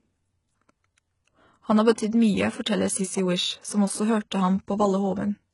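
Throughout the speech there is heavy codec damage of the kind HE-AAC compression produces, which is the likely cause. Nothing is present above about 11.1 kHz. The treble that remains sounds synthetic rather than recorded: the codec appears to encode only the lower band and rebuild the top by copying lower bands upward under a coarse envelope. Harmonics fail to align across that crossover, so sibilants come out gritty and lispy. The degree of damage fits a bitrate around 12 kbps.

At 1.94 to 1.98 s there is pre-echo. A short hiss runs for about 36 ms ahead of an attack, and the attack itself sounds softened. A second, shorter instance at 2.11 s lasts about 17 ms. In both, quantisation noise sized for the loud onset has been spread across the whole transform block and fills the quiet moment before the transient, smearing the attack backward in time.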